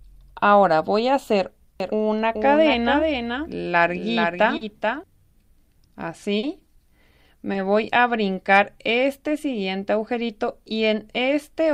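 From 1.80 to 5.04 s, a doubled audio track appears, likely from a second, slower capture path mixing the same signal back in. A full-band copy trails roughly 0.4 s behind at a few dB below the original, dry and without room colour, starting and stopping abruptly.

Short concealed packet loss follows at 4.57–4.63 s, 6.39–6.45 s and 7.53–7.57 s, where 40, 40 and 20 ms of audio missed the decoder. The receiver extended the preceding sound to bridge each gap, producing a brief smear or wobble.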